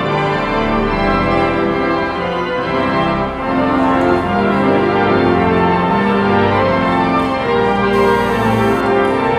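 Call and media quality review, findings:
Hard, raspy, harmonic-rich buzz, steady, 7.93–8.81 s, about 25 dB below signal. GSM phone buzz: nearby 2G phone's 217 Hz call bursts rectified by audio circuitry.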